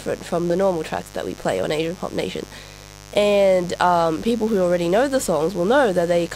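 From start to finish the speech sits on a mains buzz tied to 50 Hz power. Sharp switching spikes, twice per mains cycle, leak into the signal path and produce a steady, raspy drone roughly 20 dB below the speech. On a spectrogram this shows as a comb of fine horizontal lines at 50 Hz harmonics climbing into the kilohertz range, unbroken through pauses. The waveform carries a small spiky ripple repeating every 10 ms.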